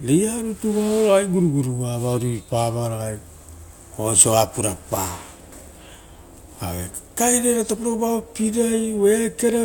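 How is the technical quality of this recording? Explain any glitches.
No glitches or technical faults can be heard here.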